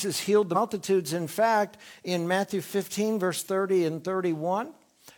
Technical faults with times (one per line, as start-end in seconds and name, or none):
0.51-0.56 damaged data in a compressed stream
3.35-3.41 damaged data in a compressed stream